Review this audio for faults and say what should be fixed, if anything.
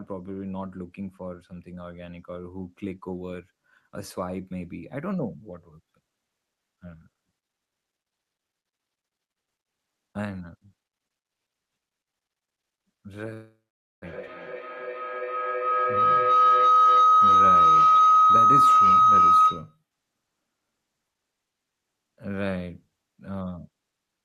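A rising whistle near 1.5 kHz swells over the speech from 13.2 to 19.8 s, peaking about 14 dB above it and pulsing roughly every 300 ms. This is feedback howl: two devices in one room form a loop whose gain exceeds unity, so each repeat grows. Prevent it by muting or using headphones on one device.

From 13.33 to 14.06 s the sound dissolves into a fading buzz, then 480 ms of silence. It resumes with about 0.6 s of speech missing. This is likely a long network dropout, with the receiver concealing the gap before giving up. A more stable connection would prevent it.

From 14.54 to 16.11 s the speech runs about 5% fast at unchanged pitch and sounds slightly hurried. This is a jitter buffer speed-up. After the gap the buffer held excess audio, so the receiver trimmed roughly 100 ms in short pitch-period slices. Steadier packet delivery would avoid it.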